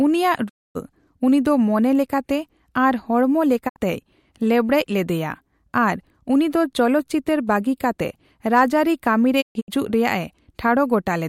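Speech briefly fades to silence at 0.48–0.77 s, 3.68–3.78 s, and in scattered holes across 9.40–9.70 s: a digital broadcast dropout, the receiver muting for lost or corrupted frames.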